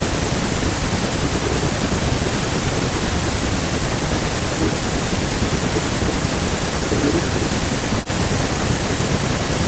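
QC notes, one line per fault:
0 to 1.79 s, 2.17 to 6.31 s, 6.86 to 9.67 s: speech suppressed in double talk. The echo canceller likely mistook speech for loudspeaker echo during cross-talk, ducking it by up to about 40 dB.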